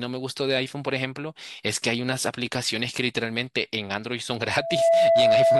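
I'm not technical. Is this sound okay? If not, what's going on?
No. From about 4.39 s to the end at 5.60 s there is a loudspeaker feedback squeal: a microphone is hearing its own loudspeaker, and one pitch near 666 Hz grows. Unlike a steady hum or whistle, it swells over about half a second until it's much louder than the speech.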